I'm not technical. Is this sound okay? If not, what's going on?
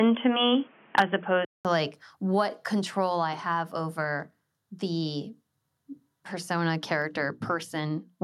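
No, there are a few problems in the first couple of seconds. From the start until about 1.65 s, the speech sounds dull and phone-like, with faint background noise and a short gap of about 0.2 s where it changes over. That's likely an input switched to a poorer device, such as a headset in call mode instead of the proper microphone.

Around 0.98 to 1.02 s, the loudest bit of speech gets a harsh, crackly edge. That's microphone overload: the input was set too high, so the tops of the loudest peaks got chopped off, likely because the level was pushed past what the converter could handle.

Right after that, at 1.02 s, the speech and the background both get slightly quieter in one small jump. That's the microphone volume stepped down, likely the call software noticing the overload and turning the input down to stop it happening again.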